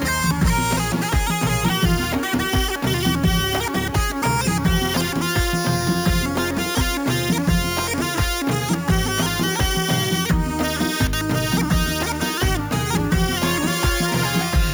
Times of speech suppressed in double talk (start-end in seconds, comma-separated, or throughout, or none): none